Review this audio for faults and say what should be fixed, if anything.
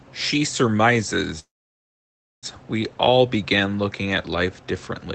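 From 1.39 s to 2.46 s the speech stops dead: a brief trailing buzz from the last sound fades almost at once into silence, which then holds for nearly a second before speech picks up exactly where it left off. This call audio freeze was likely caused by packets stalling in transit, draining the jitter buffer so the receiver stretched the final sound and then went quiet. About 1.03 s of delay was inserted and no speech was lost. The speech is band-limited to 8 kHz by the Opus call path. To prevent it, fix the network stall on the sending route or give the jitter buffer more headroom to ride out delivery gaps.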